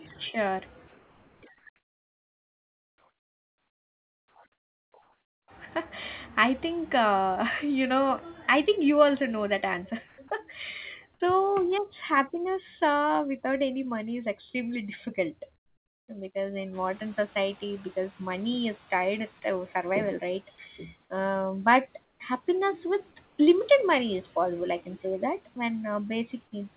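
Choppy speech opens the recording: from 0.88 to 5.48 s, quiet syllables and word edges keep vanishing, with about 4.1 s of the stretch filled in. This is sound chopped by the voice detector, likely the sender's detector switching transmission on and off repeatedly while the receiver patched each gap with comfort noise. The pauses show the same substitution in brief patches of comfort noise in place of the background. At 10.08 to 10.18 s the real background gives way to a flat, featureless hiss at an unchanged level. From 15.56 to 16.08 s, just before "because in", it turns flat and drops by about 13 dB. At 22.04 to 22.2 s, right before "happiness with limited money", it dips by about 5 dB, and at 23.26 to 23.38 s by about 2 dB. The likely cause is discontinuous transmission, with the receiver synthesising a rough imitation of the background while the sender goes quiet. Right after "because in", the room noise jumps by about 18 dB at roughly 16.5 s, and from 16.73 to 19.31 s it comes through with less reduction before sinking by about 7 dB over about 2.6 s. 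That is the noise suppressor catching up: its noise estimate lagged the sudden rise and only gradually adapted to apply full reduction. Finally, at 25.54 to 25.56 s, a tiny sliver of sound, about 10 ms, is swapped for steady noise, sound dropped by the voice detector, likely because the detector mistook quiet sound for background. Throughout, the audio has nothing above 4 kHz, which fits narrowband G.711 on the call path.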